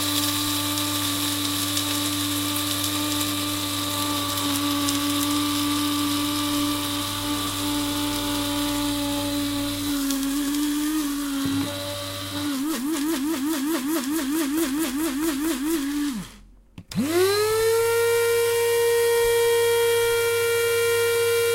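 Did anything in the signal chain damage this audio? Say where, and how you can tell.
No, nothing in the signal chain damaged this audio.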